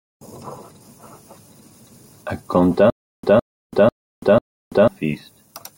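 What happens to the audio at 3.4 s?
At 3.4 s the speech is caught in a stutter with silent gaps, running from 2.9 to 4.88 s. A short burst of about 160 ms plays, then cuts to dead digital silence for about 334 ms. The same burst returns every 494 ms, four times over. The playback or stream likely stalled, replaying its last fragment at each retry before running empty. The speech that belonged in that stretch is simply lost.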